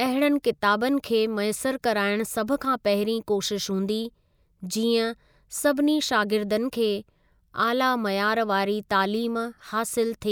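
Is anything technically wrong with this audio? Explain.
No, nothing technically wrong is audible in this speech recording, so there are no faults to list.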